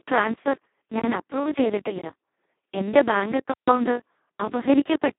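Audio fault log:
throughout, Speex codec: the speech is heavily degraded, hoarse, noisy and close to robotic, because a CELP coder with almost no bits for the excitation behaves nearly like a vocoder. This fits a bitrate of around 2 kbps. The band spans roughly 150 Hz to 3.6 kHz, with nothing above 3.8 kHz.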